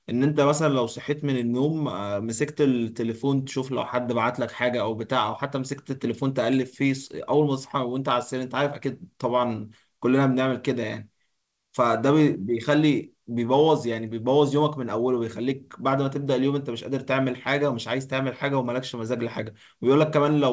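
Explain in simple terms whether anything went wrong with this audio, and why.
Yes, one thing went wrong. At about 3.43 s there is a short concealed packet loss: roughly 20 ms of the speech arrived too late, so the receiver patched the gap by extending the preceding sound and blending back, heard as a brief smear or wobble. The rest travelled through a call codec that keeps nothing above 8 kHz.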